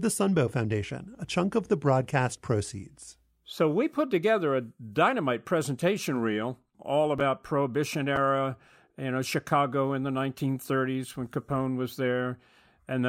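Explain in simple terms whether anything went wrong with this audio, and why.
Chunks out of order: tiny pieces of the recording, about 5 ms each, reached playback late and were slotted in after pieces meant to follow them. Just after "dynamite presentation reel all", at 7.18 to 7.21 s, and again at 8.16 s, the speech briefly jumbles.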